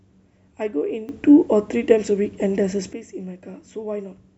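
At 1.09 s the speech and the background noise jump up together by about 12 dB in a single step, and they stay at that raised level until 2.93 s, where both drop back just as abruptly. This is a sudden gain jump. It was likely a digital gain setting applied from one sample to the next with no ramp. A compressor or automatic level control would swell and recede gradually, and would not lift the noise floor in lockstep with the speech.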